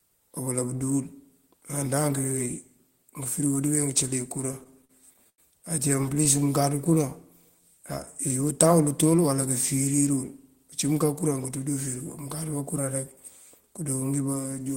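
From 4.41 to 5.40 s the speech hits repeated stalls (stutter). Packets arrived late, so the jitter buffer kept running dry. Ten gaps were bridged by stretching the last sound, about 205 ms in all, the longest 89 ms. Nothing is lost. The speech drags and catches. It happens again from 5.96 to 6.53 s, with seven shorter gaps of at most 21 ms.

From 7.52 to 7.80 s comes a jitter buffer slow-down. The buffer was low or had just raised its target delay, so the receiver repeated single pitch periods to rebuild its reserve. About 45 ms was added. The speech runs at 86% speed at unchanged pitch, sounding drawn out.

From 11.04 to 11.59 s a jitter buffer speed-up follows. Too much audio had built up, so the receiver cut short pitch-period pieces, roughly 40 ms in total. The speech runs at 107% speed at the same pitch and sounds a little hurried.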